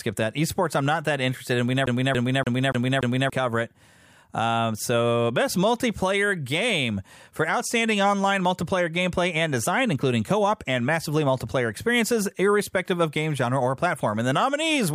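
From 1.86 s to 3.30 s the speech gets stuck like a CD stuck on one turn. A fragment about 288 ms long plays five times in a row. Each jump back is marked by a brief mute. The result is a fast, even stutter, the same chunk hammering at a steady rate. A scratch is sending the laser back one track at the same point on every rotation. Normal playback resumes just before "cover it".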